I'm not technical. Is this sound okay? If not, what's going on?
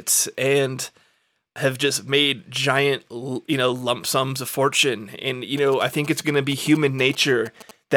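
No. From 5.58 to 7.71 seconds there are GSM signalling bursts: a galloping dit-dit-dit of short buzzes, sitting fairly quietly beneath the speech. A nearby older 2G mobile phone was sending short groups of radio pulses, the kind it sends while a call or text is being set up. The recording equipment picked those pulses up and turned them into sound, which is why the buzz has a steady 217 Hz tone.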